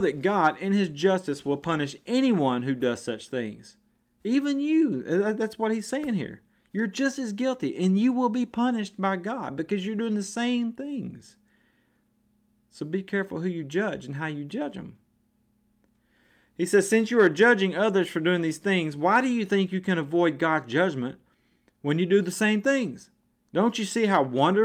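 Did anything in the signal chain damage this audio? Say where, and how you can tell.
No, nothing in the signal chain damaged this audio.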